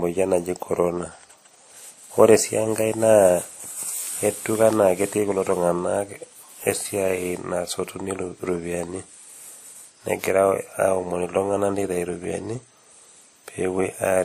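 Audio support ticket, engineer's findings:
Whole clip, speech: smeary, swirly artefacts of two kinds layered together, nothing above 15.2 kHz. Likely transcoding between lossy codecs, a low-rate MP3-style pass (fits roughly 46 kbit/s) re-encoded to WMA around 64 kbit/s, which re-codes the first pass's damage and stacks its own on top.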